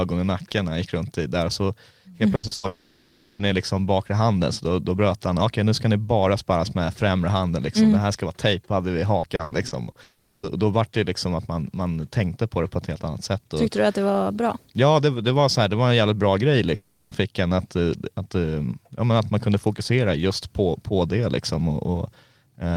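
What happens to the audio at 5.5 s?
Nothing goes wrong at 5.5 s; the speech runs on intact through that moment.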